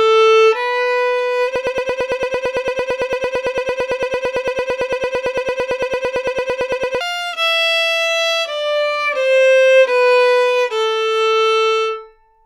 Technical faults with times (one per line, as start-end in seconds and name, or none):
1.56-7.01 broken-record loop